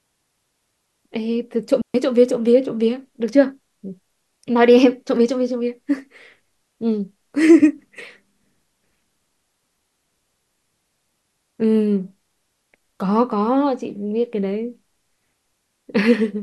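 Speech, interrupted by a digital wireless dropout from 1.82 to 1.94 s, where the sound cuts to near silence for about 129 ms and then returns. The receiver has lost too much of the digital stream to decode and mutes itself with a very brief fade rather than passing garbage. What separates it from an analogue radio dropout is how clean the hole is: no hiss, crackle or noise burst on either side of the gap.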